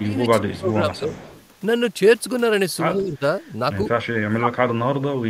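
From 0.01 to 1.12 s the speech dips by around 20 dB. This is likely speech suppressed in double talk, with the echo canceller turning down this talker while the other side speaks. From 1.1 to 1.47 s, a faint delayed copy trails about 102 ms behind, around 25 dB below the speech. It is likely an echo leak: loudspeaker echo the canceller missed and sent back. At 2.94 to 3.21 s the speech drops about 15 dB, likely suppression again. From 4.05 to 5.03 s it falls as much as 30 dB, likely the same double-talk suppression.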